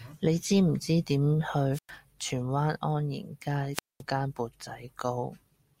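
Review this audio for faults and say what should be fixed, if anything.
Twice the speech is swallowed by a short burst of hiss followed by a near-silent hole: from 1.72 to 1.91 s, between "知唔知點" and "荃灣", with about 103 ms muted, and from 3.73 to 4.02 s, just before "間缽", with about 214 ms muted. This is wireless microphone squelch dropout: the analogue FM link faded, noise rose, and the receiver's squelch shut the output until signal strength recovered. Keep clear line of sight between transmitter and receiver, and use diversity antennas placed close to the talker.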